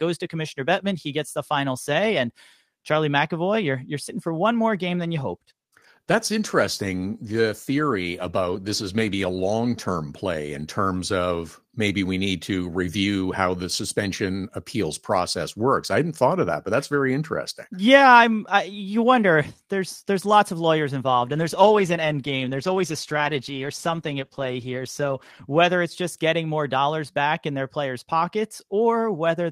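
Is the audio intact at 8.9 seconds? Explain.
No. At 8.9 s the speech sounds rougher. This is a call bitrate drop lasting from 4.94 s, just after "sitting for one more", to 10.13 s, where "play in terms of" follows. The encoder was pushed to spend far fewer bits, coding more coarsely. The sound points to a fall from about 32 to 18 kbps, held for roughly five seconds.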